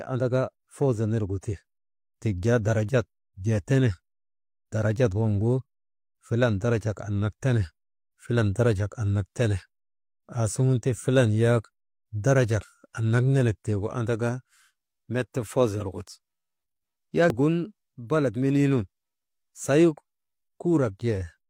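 Compressed frames skipped in this speech at 12.57 to 12.61 s, 15.77 to 15.82 s and 17.26 to 17.35 s. Each time, whole frames of the encoded audio never reach the output, because they are missing from the file or the decoder rejected them as damaged. The speech lurches forward by roughly a tenth of a second at the first two points and about a third of a second at the last.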